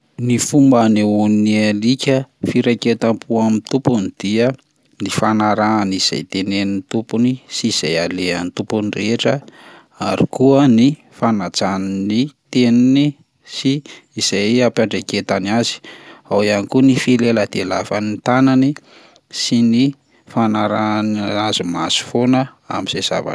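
No technical faults are audible anywhere in this speech recording.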